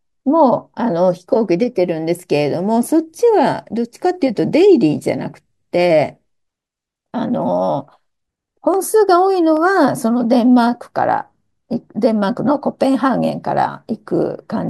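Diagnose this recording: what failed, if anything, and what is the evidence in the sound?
Two sharp, isolated clicks sit in the speech at 8.74 s and 9.57 s, each showing up as a thin vertical line through the spectrum. That points to dropped samples, most likely at the driver or buffer stage, where a handful of samples went missing in the stream. Only a fraction of a millisecond is gone each time, far too little to lose any sound, but the waveform jumps straight to a later value, and that step is the click.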